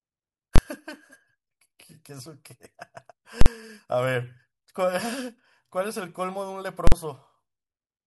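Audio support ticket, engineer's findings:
Invalid numbers at full scale: loud bangs at 0.56 s (23 ms), 3.41 s and 6.87 s (46 ms each). Processing stage emitting infinite/invalid values, clamped to full scale for one block; durations fit 1024- and 2048-sample blocks.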